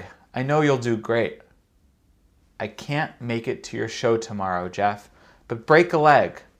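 Speech, with hard clipping from 5.71 to 6.16 s: peaks overdriven by about 2 dB are cut flat, giving brief crackle on loud syllables rather than the smooth thickening of soft saturation.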